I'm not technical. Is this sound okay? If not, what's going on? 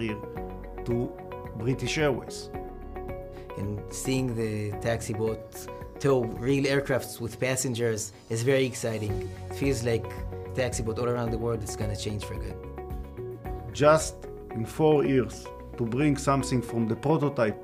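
No. There are two sharp clicks, at 8.15 s and 11.17 s. Each is most likely dropped samples: a tiny sliver of the audio, far less than a millisecond, went missing, so the sound jumps abruptly and pops without losing anything you'd notice.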